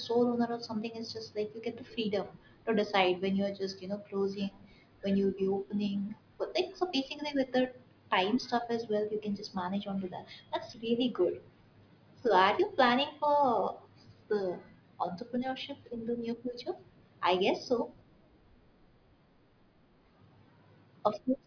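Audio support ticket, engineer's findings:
No fault found on listening to the speech recording. Nothing audible to escalate on this ticket.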